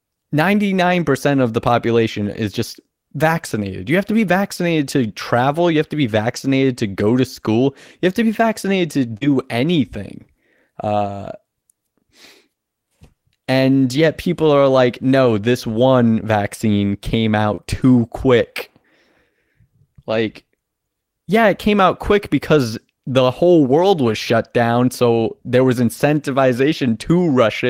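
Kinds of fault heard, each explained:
short concealed packet loss: audio missing around 9.17 s and just before "too quick" was extrapolated from prior speech, giving brief smears; the spectrogram shows smoothed, stretched harmonics.
lost packet rebuilt from error correction: five single 20 ms frames, including one after "people are like", were replaced with low-bitrate copies, sounding rougher; spectrograms show grainier, noisier slivers.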